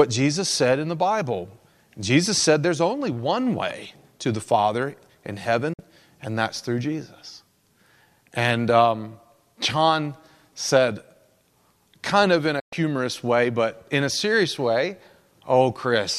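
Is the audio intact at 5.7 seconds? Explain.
No. At 5.73 to 5.79 s there's a digital broadcast dropout: the receiver lost the signal or got bad frames and muted, so the speech fades out over about 8 ms and leaves a short hole. The gap fits roughly two lost frames.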